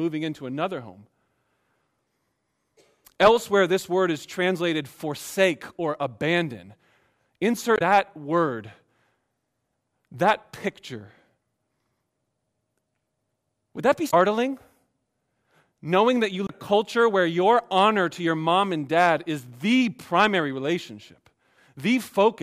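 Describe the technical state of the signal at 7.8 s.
At 7.8 s there is damaged data in a compressed stream, spanning about 7.75 to 7.82 s. Corrupted bytes in the encoded speech make the decoder misread those frames and lose sync while it hunts for the next valid frame header, so the sound breaks into a short chirp or squawk. A network dropout would leave a silent gap or a smeared concealment.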